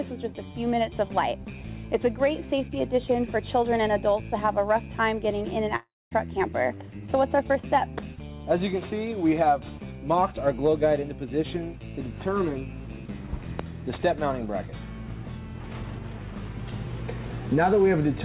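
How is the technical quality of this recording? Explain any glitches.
One glitch interrupts the sound, which comes over a call line with nothing above 4 kHz. From 5.76 to 6.13 s, the sound smears into a fading buzz, then silence. It is likely a long network dropout. About 0.36 s never arrived, and the receiver filled the gap.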